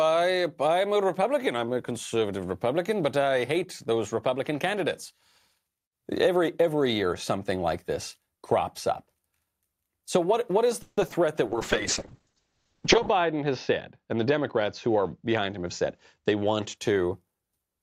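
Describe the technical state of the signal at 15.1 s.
At 15.1 s two faults overlap. A call bitrate drop runs from 11.47 to 16.83 s: the encoder's rate fell from 64 to 7 kbps, bottoming out for 1.62 s, and the bandwidth shrank from 20 kHz to 8 kHz, so the speech sounds coarse, watery and muffled.

Inside that span, a jitter buffer speed-up from 14.08 to 15.88 s has the receiver trimming short pitch-period slices of surplus buffered audio, shedding around 150 ms in total. Speech plays at about 108% speed with unchanged pitch, sounding hurried.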